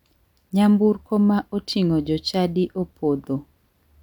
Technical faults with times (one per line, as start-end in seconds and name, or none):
none